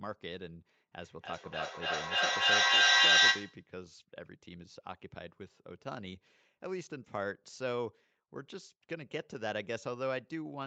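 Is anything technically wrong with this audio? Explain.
Yes. From 1.0 to 3.69 s there is feedback echo between two devices. Each sound returns about every 0.3 s, thinner and more ringing each time. The repeats pile up, peaking about 13 dB above the speech. A second device replays this microphone's signal into it, and neither echo canceller removes the other's playback.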